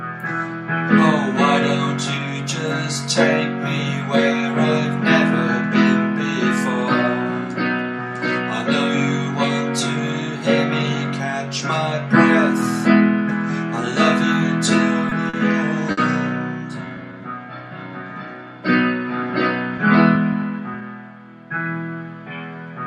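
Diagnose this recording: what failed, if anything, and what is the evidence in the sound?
Three brief holds in quick succession, at 15.09 to 15.13 s, 15.29 to 15.35 s and 15.91 to 15.99 s, each freeze the sound on one spot for 20, 40 and 60 ms respectively, with a faint buzzy sustain and nothing skipped afterwards. These are short stalls from a late packet, a network and jitter-buffer failure. Each time the buffer ran dry, the receiver stretched the last sound until the packet turned up and then resumed exactly where it left off, adding 20, 40 and 60 ms of delay respectively.

From 16.78 to 17.22 s the sound drags at an unchanged pitch, running at about 88 percent speed with a slightly drawn-out quality. This is a jitter buffer slow-down. After the preceding stalls, the receiver rebuilt its reserve by repeating single pitch periods many times in a row. That inserted 62 ms of extra material over this stretch, so the timing slows while the pitch stays put.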